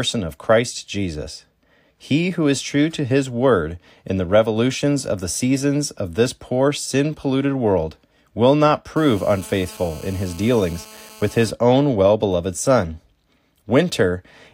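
From 8.96 s to 11.51 s, between "polluted world will not" and "own well beloved", a GSM phone buzz sits under the speech. A 2G handset nearby is transmitting in bursts about 217 times a second. The audio circuitry rectifies those radio pulses into sound. The result is a hard, raspy buzz at 217 Hz, rich in harmonics. It is about 23 dB below the speech. It holds nearly steady, which fits a phone on a call.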